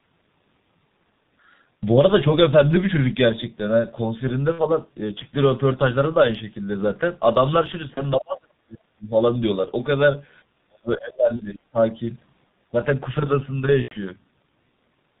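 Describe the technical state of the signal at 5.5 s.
At 5.5 s the speech carries G.723.1 codec damage, and it is not local to that moment: the same coding runs through the whole clip. The codec works in 30 ms frames and keeps nothing above 4 kHz, so the speech is muffled, with the upper band missing. Its slowly updated voice model smears fast transitions, blurring consonants and adding a hoarse, rough texture. The damage here is heavy, which fits a rate of about 6 kbit/s.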